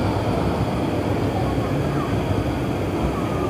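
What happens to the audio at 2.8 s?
At 2.8 s, as everywhere else in the clip, the audio is read two samples at a time (double speed). Each pair of samples is taken as a single frame, as if the data were stereo or twice as wide, so everything plays twice as fast and exactly an octave (12 semitones) higher. Unlike a clean speed-up through proper resampling, nothing filters the high end, so any strong content above a quarter of the sample rate folds back.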